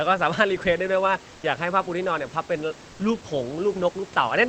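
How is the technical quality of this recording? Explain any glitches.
The speech comes through a call codec that tops out around 8 kHz, over room noise sitting about 25 dB below the voice, with two short patches where the background changes character. From 1.35 to 1.43 s and again from 2.91 to 2.99 s, each about 80 ms, the real room noise gives way to comfort noise in place of the background: a smooth, detail-free hiss at roughly the same level, about 1 dB quieter the first time and unchanged the second. The likely cause is Opus discontinuous transmission, where the sender pauses during a gap and the receiver fills it with synthetic noise.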